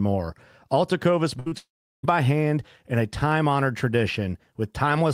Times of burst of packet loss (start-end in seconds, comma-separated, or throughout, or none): 1.39-1.48